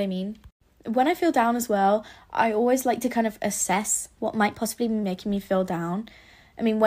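Speech clip with a drift correction step from 3.73 to 5.03 s, after "like to kind of" and before "me feel": speed rises about 6.4% and pitch about 108 cents, then snaps back, likely from clock-matching rate adjustment.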